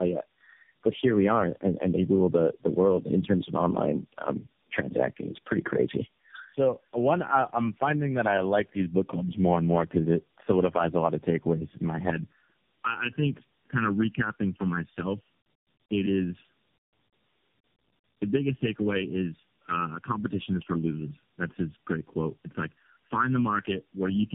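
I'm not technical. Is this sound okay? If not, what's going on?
No, not quite. The speech has tandem speech coding all the way through. The call seems to have crossed several phone networks that each squeeze speech their own way. Four of those squeezes happen in a row, each one working on the leftovers of the last, and the damage adds up. Everything above about 3.6 kHz is gone, so the speech sounds muffled, and it also comes across rough and a bit warbly.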